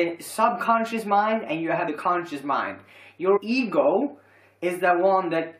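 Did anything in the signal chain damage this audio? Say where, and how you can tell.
Yes. The damage sits at the codec stage, as compressed frames skipped. At 1.87 s, and again from 3.36 to 3.38 s, the sound jumps forward. Roughly a tenth of a second of audio is missing at each point. The size of each jump points to a handful of 23.2 ms frames going missing or being rejected by the decoder.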